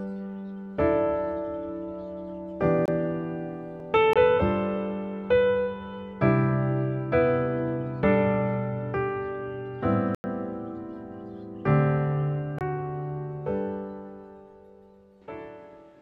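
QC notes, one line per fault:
2.86–2.88 s, 4.13–4.16 s, 12.59–12.61 s: block of digital silence. Each is a hole of about 23 ms, which fits a 1024-sample buffer left unfilled. The waveform shows a flat line, and the spectrogram shows a blank column bounded by thin vertical broadband streaks.
10.15–10.24 s: block of digital silence. This longer dropout of about 93 ms, which fits a 4096-sample block, is heard as a distinct short hole rather than a tick, with abrupt edges. The waveform shows a wider flat gap, and the spectrogram shows a wider empty band framed by vertical click lines.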